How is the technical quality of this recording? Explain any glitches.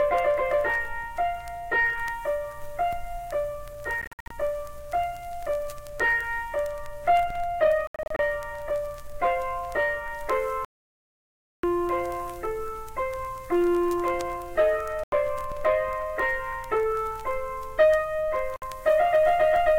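The recording is marred by five gaps where the sound cuts out. The pattern points to a likely Bluetooth dropout each time: packets missed their deadline at the headphones and were discarded, so playback fell silent and resumed further along, as if it had kept running. At 4.01–4.31 s and 7.87–8.19 s, the losses are scattered short holes adding up to roughly 0.22 s and 0.19 s, the longest about 58 ms and 73 ms, which sounds like stuttering. At 10.65–11.63 s, a solid gap of nearly a second swallows the sound outright. At 15.04–15.12 s and 18.56–18.62 s, brief clean cuts of about 87 ms and 58 ms sound like sharp blips of silence.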